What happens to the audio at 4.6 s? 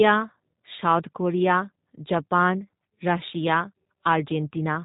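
G.729 codec coding is present at 4.6 s, as it is throughout the clip. Each 10 ms frame is rebuilt from a vocal tract filter, pitch predictor and sparse pulses, which fits an 8 kbit/s stream. The speech sounds plainly rough and synthetic, with nothing above 4 kHz.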